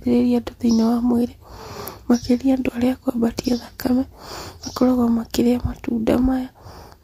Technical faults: none

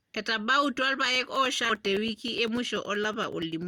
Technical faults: periodic USB or driver dropouts; skip ahead; jitter buffer speed-up

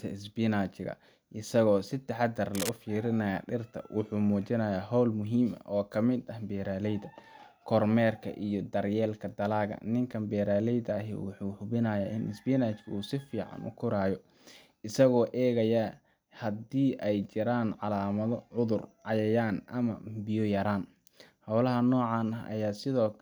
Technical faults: cable scratch noise

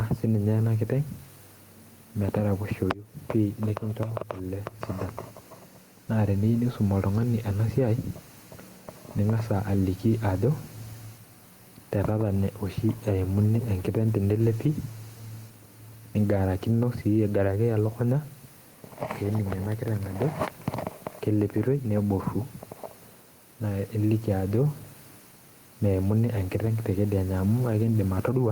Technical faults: gain pumping

